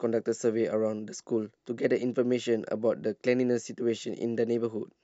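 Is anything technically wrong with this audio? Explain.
No, nothing is technically wrong with this speech clip. No audible technical problem occurs at any point in it.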